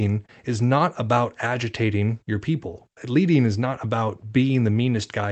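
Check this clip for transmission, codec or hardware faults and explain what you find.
No transmission, codec or hardware faults are audible here.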